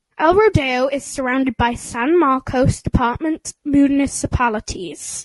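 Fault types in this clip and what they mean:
Low-delay AAC compression: Throughout the speech, the sound is rough and grainy, with noise filling the gaps between harmonics. The likely cause is a low-delay codec such as AAC-ELD. Its short frames resolve pitch poorly, and the damage fits a bitrate near 32 kbps.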